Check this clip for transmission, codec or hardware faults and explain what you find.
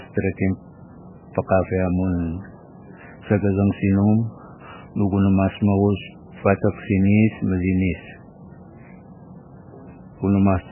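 One codec fault runs through the whole speech clip: heavy MP3 compression is the likely cause. Nothing is present above 3 kHz, pointing to a very low bitrate, around 8 kbps. With so few bits, weak frequency lines drop in and out between frames, giving watery, swirling speech and smeared consonant onsets.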